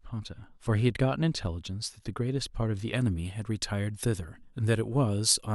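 From 2.93 s to the end of the speech, pre-emphasis is left on. The treble was lifted before recording or transmission, and the matching cut on playback never happened. Highs rise steadily above the midrange, reaching about 10 dB more at 10 kHz than at 1 kHz. That shape fits the 50-microsecond FM curve. The sound turns thin and bright. Sibilants hiss and sharpen. The lower body of the speech seems to drain away.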